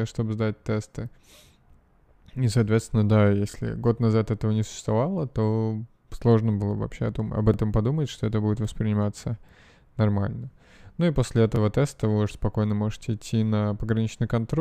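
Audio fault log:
3.51–3.54 s, 7.54–7.56 s, 11.56–11.58 s: overlapping chunks. Every 4 s, a new chunk begins about 23 ms before the previous one ended, so that slice of speech replays, giving a brief stutter-click. On the waveform, a short segment repeats after a step; the spectrogram shows a thin vertical broadband line.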